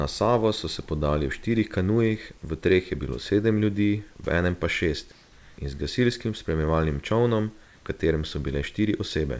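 Comfort noise in place of the background fills two pauses, from 5.12 to 5.58 s and from 7.64 to 7.86 s, likely because the sender's discontinuous transmission stopped sending sound during silence and the receiver synthesised a stand-in. The room's real background, about 28 and 32 dB below the loudest passages, gives way to a smooth, featureless hiss that differs in level by about 1 dB and about 2 dB, then the genuine ambience returns with the speech.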